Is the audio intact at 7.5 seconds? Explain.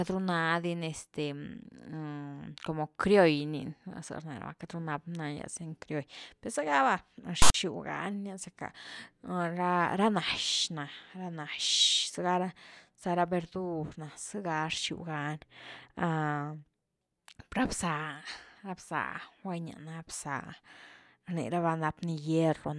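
No. From 7.42 to 7.54 s the speech is replaced by a hard-edged burst of loud, lopsided rasp that drops into dead silence before it ends. This is file tags played as audio: text metadata and its zero padding were decoded as samples.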